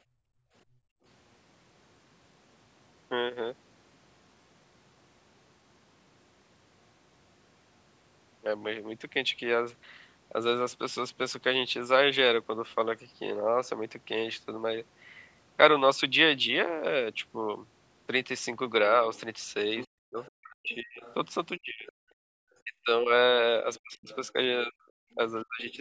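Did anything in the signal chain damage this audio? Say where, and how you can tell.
Yes, the call processing stage, specifically its echo canceller, did the damage. Background gated by the echo canceller: room tone drops about 28 dB at 0.02–1.04 s and about 40 dB at 22.16–22.36 s. Unlike a network dropout, the ambience returns as the canceller releases.

Other side's voice leaking through: a second voice sits about 25 dB under the talker at 19.15–21.92 s and 23.74–24.16 s, and about 35 dB under at 25.13–25.77 s. Incomplete echo cancellation is the likely cause.

Speech suppressed in double talk: from 19.98 s to the end, the talker's voice dips and cuts out in pieces, around 40 dB at worst and roughly three seconds in total. This likely comes from the canceller ducking both sides while the far end talks, rather than from packet loss.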